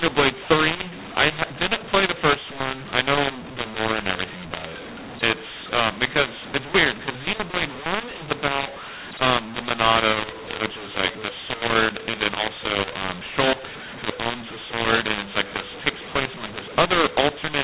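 Throughout the speech, a mu-law and A-law mix-up: audio encoded as A-law is decoded as mu-law, scrambling levels so the voice sounds harsh and distorted while pauses fill with noise. The waveform shows jagged, uneven amplitudes and raised silences; the spectrogram shows broadband grit below the 4 kHz telephone ceiling.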